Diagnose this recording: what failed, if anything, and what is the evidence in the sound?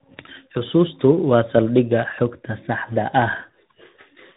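Tandem speech coding throughout, codec stage: the speech is rough, muffled and warbly with nothing above 3.8 kHz, consistent with AMR-NB output recoded by G.726.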